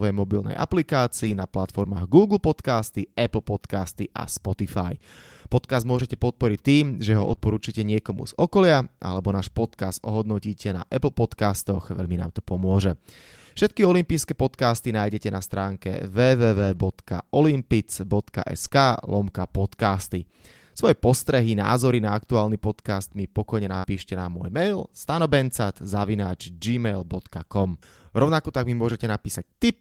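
In this speech clip, five stretches turn briefly rough and grainy, at 1.23 to 1.41 s, 7.19 to 7.33 s, 16.56 to 16.78 s, 18.64 to 18.66 s and 27.63 to 27.65 s. Each is a lost packet rebuilt from error correction: the next packets carried coarse low-bitrate copies that filled 20 to 120 ms, which fits runs of one to six 20 ms packets. Right after the second of these, at 7.35 to 7.39 s and 7.39 to 7.42 s, and again at 18.68 to 18.72 s just before "lomka podcasty", come tiny smears or wobbles. These are short concealed packet losses, where roughly 20 ms of audio failed to arrive and the decoder extended the preceding sound for about 11 to 19 ms before blending back into the real signal. At 23.78 to 23.85 s, between "aktuálny podcast mi pokojne" and "na môj mail", the sound is held and fades, then jumps ahead. This is a burst of packet loss, with about 60 ms missing and papered over by concealment that faded as the gap continued.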